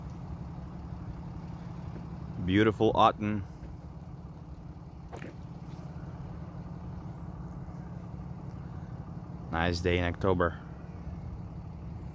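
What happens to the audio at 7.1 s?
Nothing goes wrong at 7.1 s; the audio carries straight through that moment without a dropout, click or other disturbance.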